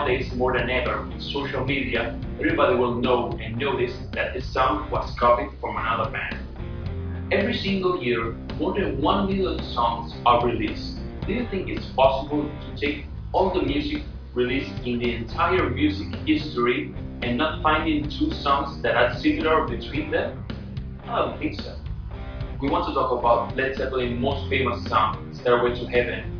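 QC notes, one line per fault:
No faults were found in this audio. Nothing in it calls for a QC note.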